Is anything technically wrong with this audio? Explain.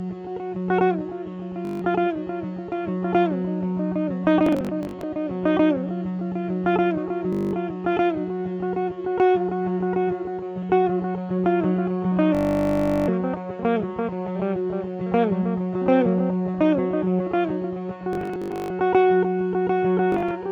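Yes, there is Bluetooth stutter at 1.65–1.82, 4.46–5.04, 7.33–7.53, 12.35–13.08, 18.13–18.70 and 20.12–20.31 s. The wireless link lost or delayed data, so the receiver kept replaying its last short slice. That gives a buzzing, machine-gun repeat, worst for about 0.73 s at 12.35 s, before the sound jumps ahead.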